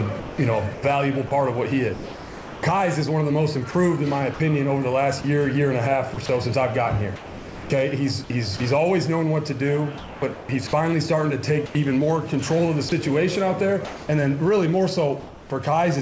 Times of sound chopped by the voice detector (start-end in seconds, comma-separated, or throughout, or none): 0.20-8.60, 9.98-15.50